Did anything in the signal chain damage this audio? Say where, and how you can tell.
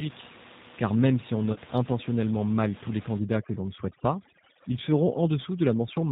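Yes. Throughout, the speech is band-limited, with nothing audible above about 4 kHz, and has a slightly rough, synthetic grain, as if rebuilt rather than recorded. That points to the G.729 codec at the codec stage. It sends only a vocal-tract filter, a pitch predictor and a few pulses per short frame, consistent with an 8 kbit/s call, so the fine detail of the voice is replaced by an approximation. The damage is plainly audible.

At 1.53 s the sound is briefly stretched into a fading fill and stays weak until about 1.58 s. This is VoIP packet loss concealed by the speech codec, a network-stage fault. About 30 ms of audio went missing, which fits a single lost packet. The decoder filled the gap by repeating its last pitch and filter at falling gain, and because each frame builds on the previous one, the voice took a moment to recover.

From 3.19 s to the end, the background drops and breaks up into twinkling specks. 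This is overdone noise removal in call processing. The suppressor switches off individual frequency bands whenever they sit close to its noise estimate, and quieter parts of the voice are taken along with them. Before 3.19 s the room noise can be heard about 16 dB below the speech, which is the noise this stage was attacking.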